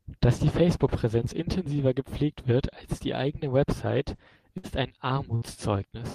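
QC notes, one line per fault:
4.57–4.66 s and 5.35–5.45 s, burst of packet loss: a run of audio packets was lost or arrived too late to play, twice. Each time the receiver filled roughly 60 ms by extending the last sound it had and fading it down, which gives a brief held, dwindling sound in place of the speech. Playback then picks up about 60 ms further along, so that stretch of speech is skipped.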